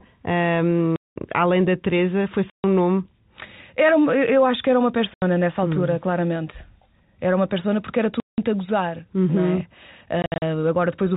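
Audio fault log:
0.96 to 10.42 s, packet loss filled with silence: gaps at 0.96 s (200 ms, before "além da"), 2.5 s (140 ms), 5.14 s (80 ms, after "acho que era uma"), 8.2 s (180 ms, before "a gozar"), and 10.22 s (short holes scattered over 200 ms). The gap lengths are multiples of 20 ms, which points to 20 ms packets that were replaced with silence. On the waveform these show as flat-line holes with vertical edges, and on the spectrogram as blank columns. Through the telephone-band G.711 coding, nothing appears above 4 kHz.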